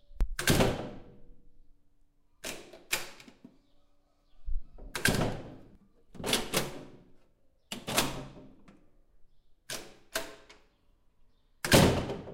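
Sounds, with no audible technical faults anywhere in the recording.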